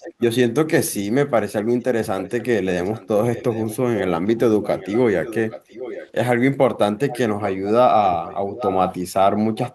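A faint, delayed copy of the speech trails the talker by about 0.81 s, roughly 15 dB down, at 0 to 0.5 s, 1.69 to 2.45, 2.84 to 3.77, 4.33 to 6.12, 6.99 to 7.71, 9.55 s to the end, and louder, about 10 dB down, at 8.05 to 8.93 s. This echo leak is likely a loudspeaker-side echo canceller letting picked-up sound return.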